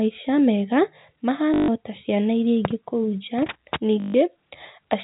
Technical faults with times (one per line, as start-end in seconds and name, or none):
1.54-1.68 packet loss with last packet repeated
4.00-4.14 packet loss with last packet repeated